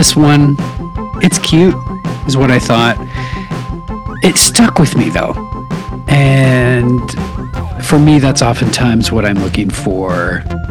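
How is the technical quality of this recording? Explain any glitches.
The technical quality is compromised by repeated hard clipping, in five stretches: 0.00–0.49 s, 1.24–1.70 s, 2.39–2.92 s, 6.11–6.95 s and 7.93–9.59 s. In each, the level overshoots what the chain can carry, by roughly 8, 11, 8, 6 and 9 dB respectively, so the peaks get sliced flat. Those squared-off tops throw harmonics high up the spectrum, giving a harsh, fuzzy crackle on the loud moments, worst around 1.2–1.7 s.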